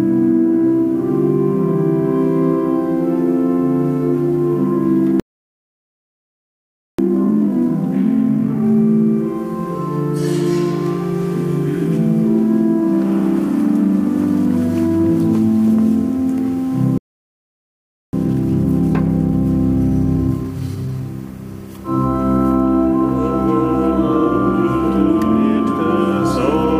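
The audio has two playback stalls, falling silent mid-flow from 5.20 to 6.99 s and from 16.98 to 18.13 s, with the likely cause an emptied buffer or blocked playback thread. Each stall is followed by time-compressed catch-up at unchanged pitch, running at 2.0x from 6.99 to 8.77 s and 1.1x from 18.13 to 21.13 s.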